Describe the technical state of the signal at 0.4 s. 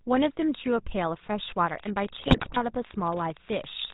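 At 0.4 s the speech sounds buzzy and gravelly with nothing above 4 kHz, as throughout, the mark of the GSM full-rate codec, whose pulse-driven vocal-tract model fits a 13 kbps stream.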